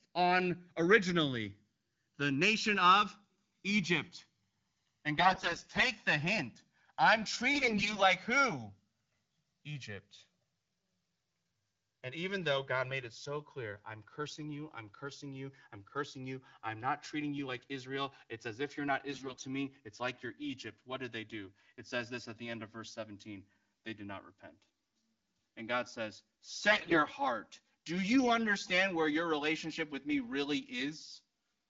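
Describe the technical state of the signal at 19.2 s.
AMR bit errors run from 19.12 to 19.42 s, covering the moment at 19.2 s. Over that span, which fits about fifteen consecutive codec frames, roughly a fifth of the bits came through flipped. The weakly protected bits were corrupted while the core bits still passed the checksum, so the decoder accepted the frames. The excitation pulses land in the wrong positions and the fine pitch, gain and spectral values drift. The speech keeps its rough pitch and loudness but turns hoarse, scratchy and gargly.

Channels drifting apart is also present at 19.2 s, as it is across the whole clip. The two channels run on separate clocks that differ by something like 100 ppm, so the delay between them keeps growing, reaching around 4 ms by the end. When the channels are summed to mono, the comb-filter notches sweep slowly through the spectrum. This is heard as a gradual flanging whoosh under the speech, including under the garbled stretch.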